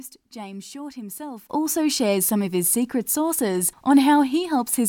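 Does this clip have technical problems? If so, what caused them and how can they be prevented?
Yes. At 1.50 s the speech and its background noise both jump about 14 dB louder in one step and stay there to the end, a sudden gain jump. It was likely caused by a gain change applied without a ramp. Unlike a speaker raising their voice, the noise floor rises too. Ramp every gain change over a few milliseconds instead of switching it between samples.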